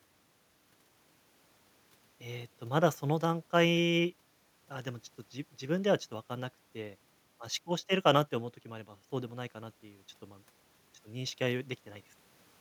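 Nothing in this recording of speech comes across as a technical fault, so there's no moment to point to and nothing that needs explaining.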